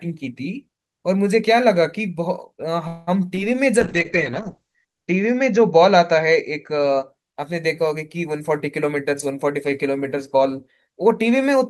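A speech recording carrying four call-transport faults. From 2.87 to 3.09 s there is a call audio freeze: packets were likely held up in transit so the jitter buffer ran dry, and the receiver stretched the last sound into a fading buzz for about 0.2 s. Nothing is lost when the packets arrive, but everything after plays roughly 0.2 s later. Shortly after, at 3.35 to 3.39 s, a short concealed packet loss occurs: about 20 ms never reached the decoder in time, so the receiver improvised a continuation and blended back, leaving a brief smear. Starting at 3.79 s and lasting until 7.15 s, a call bitrate drop follows: the bandwidth estimate fell and the encoder was pushed from 32 to 8 kbps, with audio bandwidth cut from 20 kHz to 8 kHz, so the speech turns coarse, watery and muffled, bottoming out for about 1.07 s. Finally, from 8.40 to 11.22 s, a jitter buffer speed-up trims excess buffered delay by repeatedly cutting out pitch-period-sized pieces, removing around a fifth of a second in total. 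The speech runs at about 107% speed with its pitch unchanged, sounding hurried.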